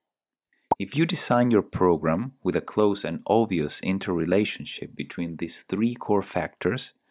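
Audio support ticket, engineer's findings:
No technical faults found in the signal path on review; levels, continuity and timing present no anomalies requiring action on this ticket.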